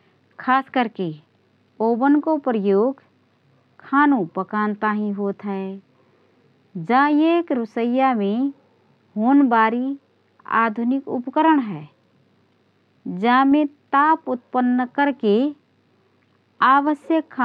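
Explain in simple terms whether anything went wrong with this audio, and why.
Nothing went wrong here: the speech comes across steady and whole, with no glitches, gaps or odd sounds anywhere to point to.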